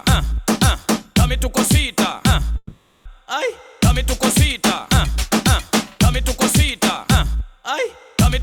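At 2.57 s the sound stalls for half a second into a fading buzzy tail, a classic call audio freeze. Packets were likely held up in transit, draining the jitter buffer. The receiver filled about 480 ms and then picked up where it left off, so nothing's lost but everything after runs roughly half a second late.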